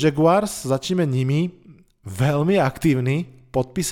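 No audible technical faults.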